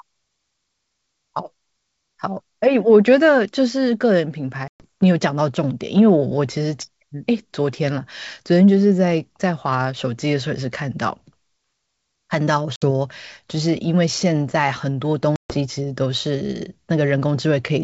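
Packet loss on an ADPCM call cuts hard silent holes at 4.68–4.84 s (120 ms lost), 12.76–12.84 s (60 ms) and 15.36–15.58 s (140 ms). Unlike smoothly concealed loss, each gap is abrupt silence, and the speech then comes back slightly distorted. This happens because the decoder's predictor and step size have drifted from the sender's, and they realign within tens of milliseconds.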